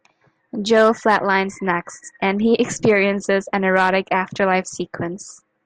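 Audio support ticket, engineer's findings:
No audible faults found in the speech recording; no defect to attribute to any component in the chain.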